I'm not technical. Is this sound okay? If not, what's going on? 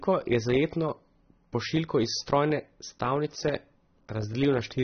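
No. The speech sounds dull and smeared from start to finish, likely from AAC compression squeezing the audio and cutting everything above 6.3 kHz.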